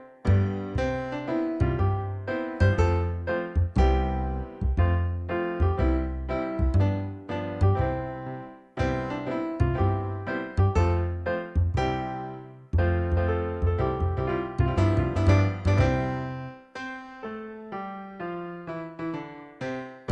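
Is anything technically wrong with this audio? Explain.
Yes. From 12.88 to 15.96 s there's a doubled audio track: a second full-band copy of the sound trails the original by roughly 0.4 s, around 5 dB quieter. It's most likely the same signal picked up twice, through a second path that runs slower than the main one. The copy is dry, with no decay or room colour, so it sounds like a flat slapback echo that switches in and out abruptly at both ends.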